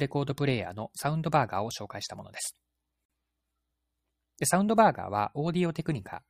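Speech encoded in separate pieces, about 6 s long, was joined without trimming each run's start delay and last-frame padding. The result is a gap at a join of encoded pieces from 3.05 to 3.10 s: a 43 ms gap, smeared edges, then speech resumes where it stopped.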